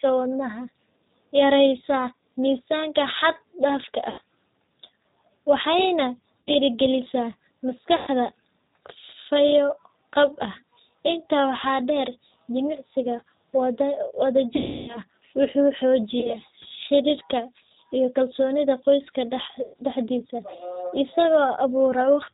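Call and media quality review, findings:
G.729 codec throughout: speech band-limited below 4 kHz, rough and synthetic, damage plainly audible. Fits an 8 kbit/s G.729A stream rebuilding speech from filter, pitch and pulse model.

VoIP packet loss concealed by the speech codec: sound stretched into buzzy tone or coloured noise fading out at 4.10–4.21 s after "yareysaa miisaanka xad dhaafka", 6.42–6.51 s, 7.96–8.10 s, 14.56–15.00 s (longest), 16.20–16.37 s in broken bursts before "xiriirka iyo kalsoonida qoyska", and 19.63–19.75 s after "xiriirka iyo kalsoonida qoyska". Decoder extrapolates last pitch and filter with falling gain. Weak recovery afterwards.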